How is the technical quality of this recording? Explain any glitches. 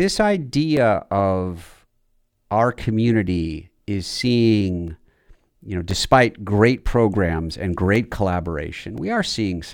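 The recording has one recurring glitch: periodic USB or driver dropouts. Starting at 0.77 s and repeating every 1.02 s through 8.98 s, something in the system stalls the USB bus or the audio driver on a fixed schedule, so a few samples never reach the recording. Each time, roughly 2 ms of audio is replaced by silence. In the speech this sounds like an evenly spaced tick or click, heard only while there is signal.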